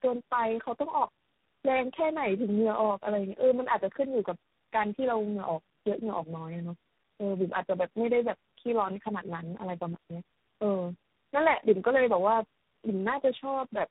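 From start to finish the speech carries tandem speech coding. It sounds rough, muffled and warbly, as though it passed through about four low-rate speech coders in a row, decoded and re-encoded at each link. Each stage smears the previous one's errors further. On a spectrogram nothing appears above 3.9 kHz, harmonics look blurred and patchy, and formant bands wobble. The waveform shows grainy, uneven envelopes rather than clean periodic cycles.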